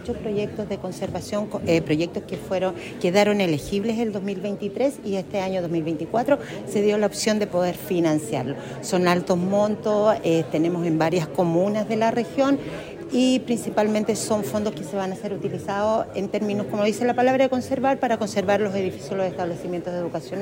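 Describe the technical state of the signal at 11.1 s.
At 11.1 s the audio is intact, with no dropout, distortion or other fault to be heard at that point.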